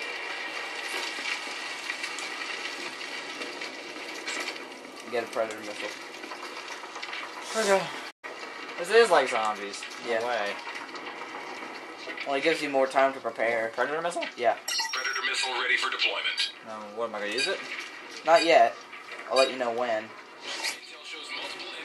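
At 8.10 s the sound cuts out abruptly in mid-flow. Silence follows until 8.24 s, a gap of about 120 ms. This is a playback stall. The player likely ran short of data or its thread was blocked, so output stopped until it recovered.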